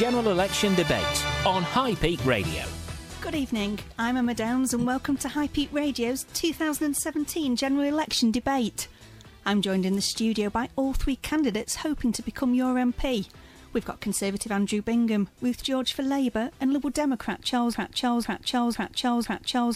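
At 17.74 s the audio falls into a broken-record loop: a 0.50 s fragment repeats exactly, back to back, four times through to the end. Likely a stalled player or stream resending its last buffer. A spectrogram shows identical blocks tiling at that interval.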